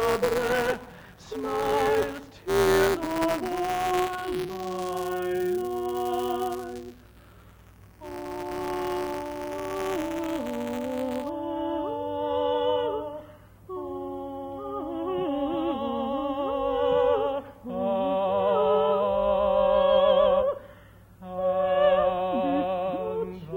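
From 0.0 to 11.29 s the audio carries buffer tearing. The writing side and the hardware reading side of the ring buffer have drifted so their positions cross within every period, leaving a small slice of each buffer filled with audio from the previous lap, roughly ten milliseconds stale, with hard joins at both edges. The result is a steady robotic buzz at 172 Hz, which fits a 256-sample buffer, riding on the sound wherever signal is present.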